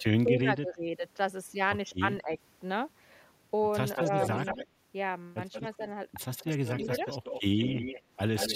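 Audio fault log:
0.00–0.84 s, 1.99–2.38 s, 4.04–4.13 s: speech suppressed in double talk. The speech dips sharply, by about 30 dB at the start and about 10 dB later. This is likely an echo canceller turning the talker down while the far side also spoke.
3.96–4.67 s, 5.52–5.82 s, 6.35–8.02 s, 8.36–8.55 s: echo leak. A delayed copy of the speech trails 182 ms behind, about 5 to 10 dB below it. Likely a loudspeaker echo the far end's canceller failed to remove fully.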